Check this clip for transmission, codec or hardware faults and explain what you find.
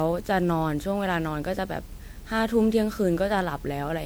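The speech sounds swirly and hollow from start to finish, with a watery smear through the upper frequencies and consonant onsets that have lost their edges. That degradation is heavier than a single MP3 pass at a bitrate around 128 kbit/s would produce, so the likely cause is generation loss: the audio decoded and re-encoded about ten times. Each new pass quantises on a shifted frame grid, stacking fresh noise and spectral gaps onto the old ones.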